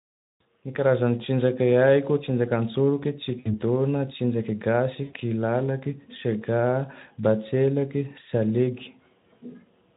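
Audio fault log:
3.39–3.54 s and 5.03–5.17 s, VoIP packet loss concealed by the speech codec: the speech smears into a buzzy, fading tone and stays weak for a moment afterwards. The Speex decoder bridged gaps of 60 ms and 100 ms by extending its last pitch and filter at falling gain.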